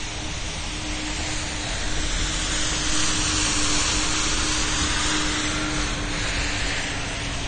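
From start to finish the sound is dull and smeared. Nothing reaches above 9 kHz, so the top end is simply missing. Sustained parts carry a warbling, fizzy texture, and the damage is plainly audible. The likely cause is AAC compression. An AAC-LC encoder squeezes each frame against a hearing model. Short of bits, it drops the highest band and coarsens what remains. The depth of damage fits a low bitrate around 32 kbps.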